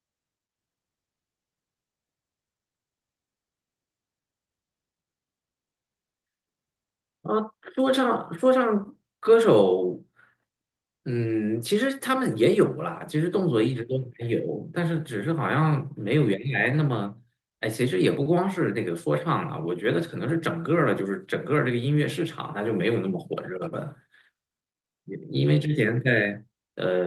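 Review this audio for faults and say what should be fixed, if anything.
Nothing to fix: no audible faults anywhere in the speech.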